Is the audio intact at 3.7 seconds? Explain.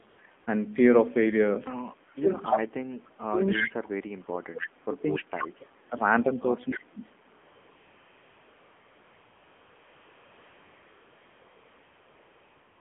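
No. From 2.16 to 5.97 s the speech dips deeply, at worst around 35 dB, likely speech suppressed in double talk, where the echo canceller turns down both the talker and the loudspeaker echo.

From 3.47 to 3.7 s a delayed copy of the speech, 292 ms late and only about 5 dB quieter, trails behind. This is likely an echo leak from a loudspeaker the canceller did not fully remove.

Throughout the clip, the sound is buzzy and synthetic and confined to roughly 200 Hz to 3.4 kHz. This is the AMR narrowband mobile codec, and the plainly audible damage fits a low bitrate near 7.4 kbps.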